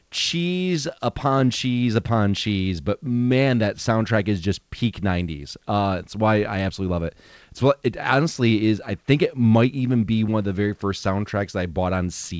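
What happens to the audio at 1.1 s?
Nothing goes wrong at 1.1 s: the speech passes through intact, carried over the G.722 call path with its normal coding and nothing above 8 kHz.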